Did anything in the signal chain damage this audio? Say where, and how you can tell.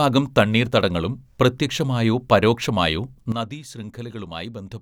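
Yes. At 3.32 s, right after "തണ്ണീർത്തടങ്ങളും പ്രത്യക്ഷമായോ പരോക്ഷമായോ", a sudden gain jump drops the level by about 12 dB to the end. Speech and background noise fall together in one step, not over a ramp like a fade or compressor, most likely a digital gain setting applied abruptly.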